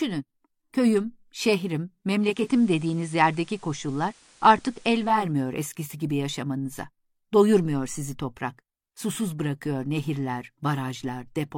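From 2.11 to 5.35 s the speech shows digital radio blending to analogue: the receiver lost its digital stream and cross-faded over about 0.45 s to the station's FM signal and back. A low-bitrate codec switch would narrow the band without noise, but here hiss appears, roughly 30 dB down, with a level shift of about 1 dB.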